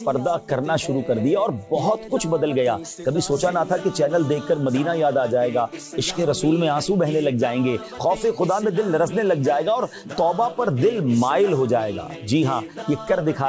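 No technical faults can be heard anywhere in the recording. The audio has come through a call path, and its content stops at 8 kHz, which fits a wideband call codec such as G.722.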